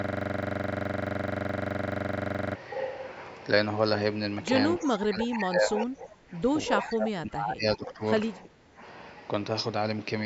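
From the start of the clip to 2.56 s, a system hang loop is already under way: a single 42.67 ms slice of audio repeats exactly, roughly sixty times, producing a steady buzz at 23.4 Hz. This fits a 2048-sample ring buffer that the sound hardware kept cycling through while the driver or host was frozen.

From 4.8 to 6.36 s, the speech dips by as much as about 20 dB. It dips again from 6.77 to 8.01 s, by up to about 25 dB, and from 8.43 to 8.8 s, by about 10 dB. This is speech suppressed in double talk, likely caused by the echo canceller attenuating the near talker while the far side spoke at the same time.

Short echo leak fragments appear at 4.84, 5.78 and 6.81 s, each under 0.1 s long. They are copies of the speech delayed by 351 ms and sit about 15 dB below it. The likely cause is loudspeaker pickup that the far end's echo canceller failed to fully remove.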